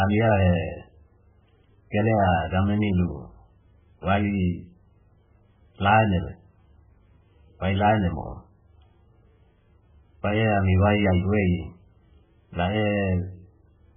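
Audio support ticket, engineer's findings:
Heavy watery, swirly artefacts across the whole speech clip, s sounds metallic and chirpy, onsets smeared. Likely MP3 compression at a very low bitrate, fitting about 8 kbps: weak frequency lines dropped frame to frame. Spectrogram shows a flat ceiling at 3.4 kHz, with flickering holes below.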